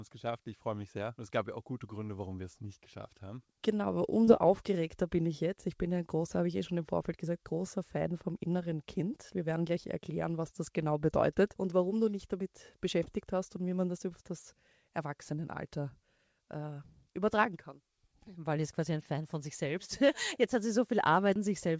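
Around 4.25 s and again at 13.03 s there's short concealed packet loss: roughly 30 ms of audio arrived too late, so the receiver extrapolated the preceding sound and crossfaded back. Each gap comes across as a quick smeary wobble. The band stops at 8 kHz, which fits G.722.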